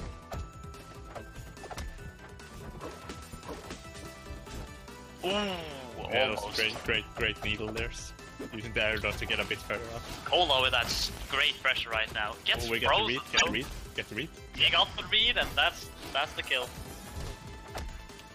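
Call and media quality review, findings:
13.36–13.43 s: brief glitch of about 70 ms, with the audio skipping ahead across it. Likely component: MP3 decode path, broken MP3 bit reservoir after lost frames. The first frame after the gap reads its back-referenced data from bytes belonging to another frame. The span covers under three frame periods, which fits 26.1 ms MP3 frames.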